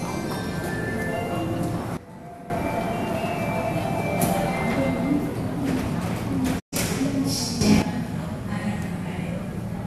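A recording of sounds with two faults. A sudden gain jump, likely from a gain setting applied without a ramp, drops the sound and its background noise together by about 15 dB from 1.97 to 2.5 s, then lifts them by about 10 dB between 7.61 and 7.82 s. A digital broadcast dropout occurs when the receiver mutes on failed frames: at 6.58 s the sound fades out over 20 ms, leaving a 120 ms hole before it returns at 6.74 s.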